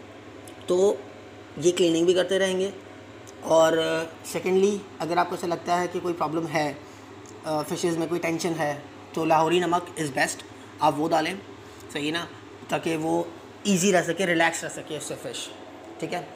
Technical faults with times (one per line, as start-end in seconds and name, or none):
none